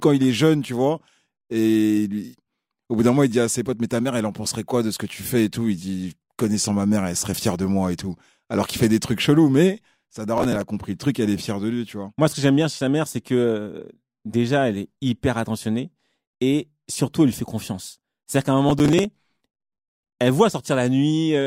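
A speech recording with two bursts of processor overload crackle, at 10.38 to 10.62 s and again, longer, at 18.69 to 19.94 s. The processor fell behind, and missed buffer deadlines were filled with scraps of old audio, each hard-edged fragment sounding like buffers of around 10 ms. Unlike a single dropout or level clipping, this is a dense gritty tearing of many repeated tiny skips, independent of loudness, that stops abruptly once the load eases.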